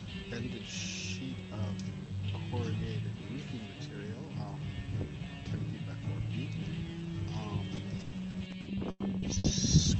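From 7.75 to 9.80 s, repeated packet loss gives a robotic, choppy sound. Eleven gaps, the longest 100 ms, are patched by stretching the last sound.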